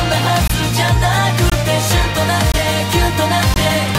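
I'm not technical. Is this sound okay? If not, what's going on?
No. The sound drops out briefly four times, at 0.48, 1.50, 2.52 and 3.54 seconds. Each hole is about 21 milliseconds. This is a gap between chunks: the audio comes in one-second pieces, and silence sits between them.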